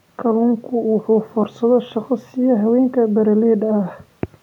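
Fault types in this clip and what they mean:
I hear nothing here that stands out as a technical fault, so there's nothing to list.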